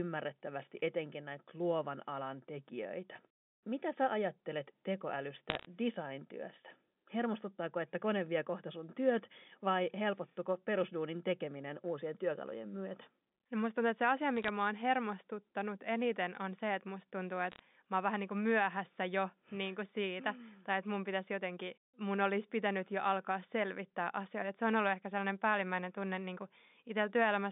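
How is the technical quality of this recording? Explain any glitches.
The recording is a G.711 phone line passing roughly 200 Hz to 3.6 kHz. It has three brief bursts of crackle. The cause is bit errors on a digital phone line. They occur at 5.5 to 5.66 s, 14.36 to 14.48 s after "tuntuu että se asia", and 17.52 to 17.60 s after "se että musta tuntuu". A small fraction of a percent of bits flip. Each flip corrupts one sample, and flips that hit high bits give sharp ticks over the speech.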